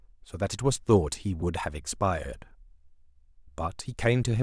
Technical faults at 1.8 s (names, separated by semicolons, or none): none